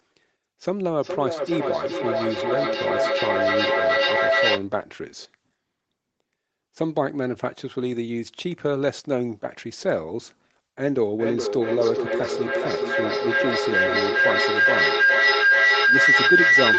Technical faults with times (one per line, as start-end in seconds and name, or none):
0.99-4.70 feedback echo between two devices
10.95-16.79 feedback howl